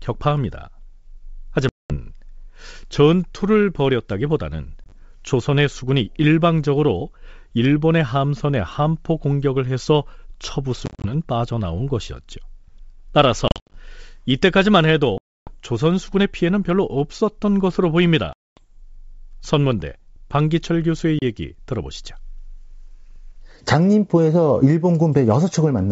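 Packet loss on an ADPCM call drops stretches of the speech stream, and the decoder fills each gap with silence. Because ADPCM carries only differences, the receiving predictor and step size lose track of the sender's. When speech resumes it comes back slightly distorted, before settling over the next few tens of milliseconds.

The holes fall at 1.69 to 1.96 s (210 ms missing), 4.84 to 5.02 s (40 ms scattered over 80 ms), 10.86 to 11.12 s (120 ms over 180 ms, longest gap 40 ms), 13.48 to 13.75 s (190 ms over 260 ms, longest 70 ms), 15.18 to 15.54 s (290 ms), 18.33 to 18.64 s (240 ms) and 21.19 to 21.23 s (30 ms). The scattered ones sound like stuttering dropouts, and the long ones like abrupt hard-edged gaps. Between them, the G.722 wideband coding stays clear up to about 7 kHz.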